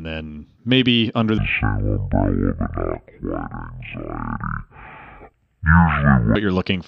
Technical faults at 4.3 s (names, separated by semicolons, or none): stereo read as mono